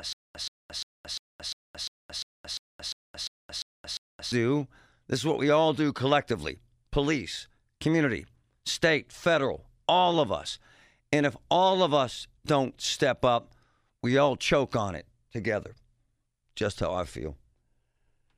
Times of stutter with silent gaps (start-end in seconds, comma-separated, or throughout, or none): 0.00-4.32